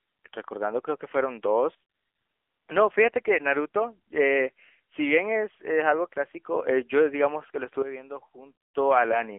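From the start and throughout, the speech carries AMR narrowband mobile codec damage: a telephone band of roughly 300 Hz to 3.4 kHz with a plainly buzzy, synthetic edge, which fits a low rate near 8 kbps. Unlike simple band-limiting, the pulse-driven vocal-tract model adds that artificial, reedy texture.

At 1.75 s a sudden gain jump drops everything by about 14 dB, speech and background together, until 2.17 s, when the level snaps back. Both edges are instant, with no fade, which sets it apart from compression or gating. The likely cause is a gain change applied without a ramp.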